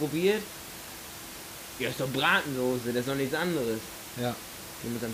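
No technical faults are present in the speech, with only the recording room's own background noise audible at about 13 dB below the voice.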